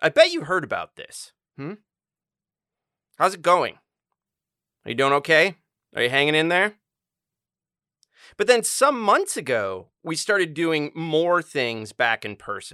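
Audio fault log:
No audible faults anywhere in this speech recording.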